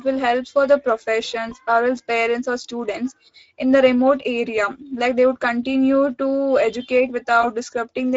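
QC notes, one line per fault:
throughout: Speex codec. The sound has a noisy, hoarse grain because the CELP coder has limited bits to model the excitation between pitch pulses. The plainly audible degradation fits Speex at around 16.8 kbps.
1.49–1.54 s and 7.41–7.52 s: VoIP packet loss concealed by the speech codec. Each gap fits one lost 20 ms frame. The decoder repeated its last pitch and filter at falling gain, stretching the sound into a fading tone or noise that stays weak until the decoder state recovers.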